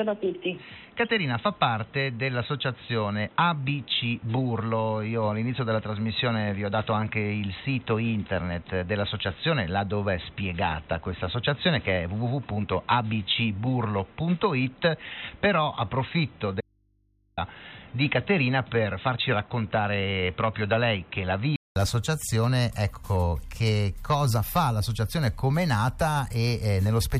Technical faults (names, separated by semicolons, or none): input switched to a poorer device; audio dropout to a faint residue